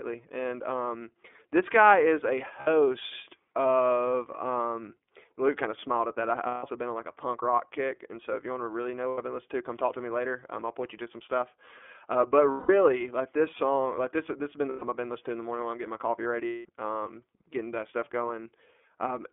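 From the start the speech comes through the iLBC codec, confined to a band of roughly 250 Hz to 3.5 kHz, with plainly audible coding damage: a rough, slightly synthetic edge on every syllable. The texture fits iLBC's 30 ms frame mode at around 13.3 kbps. What separates it from a generic narrowband codec is that the roughness stays even and never smears from one frame into the next.

Against that background come six dropouts, heard as lost iLBC frames: 2.60 to 2.68 s (60 ms), 6.47 to 6.64 s (150 ms), 9.09 to 9.18 s (90 ms), 12.50 to 12.69 s (180 ms), 14.69 to 14.83 s (120 ms) and 16.46 to 16.65 s (180 ms). Each length fits a whole number of 30 ms frames. In each gap the decoder repeats the last pitch cycle mixed with noise, so the sound becomes a held, buzzy or breathy vowel that fades in the longer gaps. Unlike a plain mute or a click, the hole is filled. Because iLBC frames stand alone, normal speech returns almost at once after each gap, with no lingering distortion.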